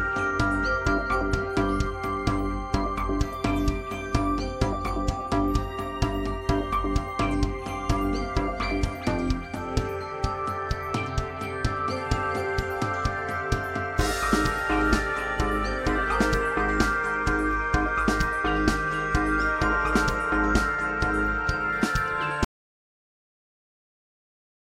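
At 22.44 s the sound stops dead and never returns, leaving about 2.25 s of audio dropout to silence running to the very end. The input was likely lost through a disconnected device, failed link or accidental mute while recording continued, filling the gap with silence. Unlike a natural pause, fade-out or noise gate, there is no decay and no residual room tone or hiss, just abrupt silence.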